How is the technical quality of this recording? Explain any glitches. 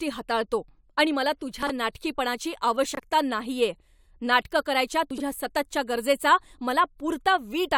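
The recording has three brief glitches, all of one type. Chunks out of order occur at 1.63 to 1.70 s (after "हाताळतो आणि मला"), 2.95 to 3.00 s, and 5.11 to 5.20 s (between "नाटकं करायच्या" and "सततच्या गरजेचा"). In each, a chunk of about 23 ms plays one to three chunks late, behind audio meant to follow it. Nothing is lost, but the reordering and its hard joins produce a short jumbled stutter.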